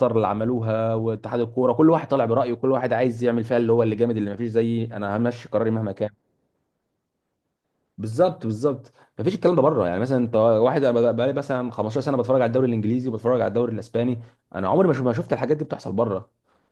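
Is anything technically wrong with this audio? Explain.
No, nothing technically wrong can be heard here.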